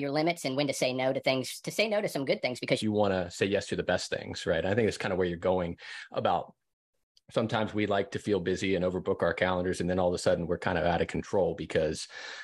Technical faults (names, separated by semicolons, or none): section at the wrong speed